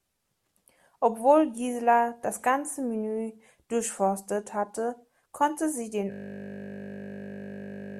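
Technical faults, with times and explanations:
6.12 s to end, system hang loop: the system froze while playback kept cycling a 20 ms buffer. That slice repeats exactly, giving a steady 50 Hz buzz.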